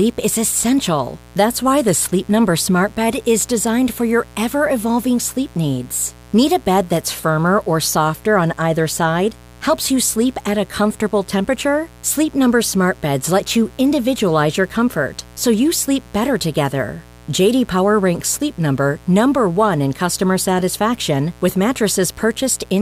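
A speech recording with mains buzz running through its whole length. The buzz is steady and raspy, sitting roughly 25 dB below the speech. Its harmonics climb from 60 Hz into several kilohertz. Sharp switching spikes, twice per mains cycle, from a dimmer, rectifier or unshielded cable cause it.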